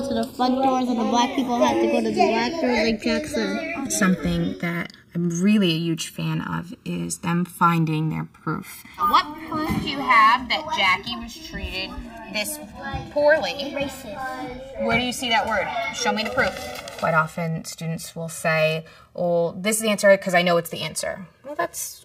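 From start to finish, the two channels are drifting apart: they were captured on devices running from separate clocks that disagree by something like 70 parts per million, so the time offset between them keeps growing, reaching around 2 ms by the end. Folded into one channel, that shifting delay creates comb-filter notches that glide steadily through the spectrum, heard as a slow, continuous flanging sweep over the audio.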